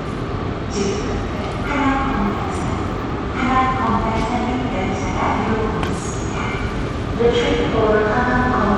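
Everyday sound, with Bluetooth SBC compression damage plainly audible throughout. The treble flickers and drops away. A gritty noise and aliasing ride on top. This is likely a low bit pool starving the upper sub-bands, which fits a rate near 96 kbps.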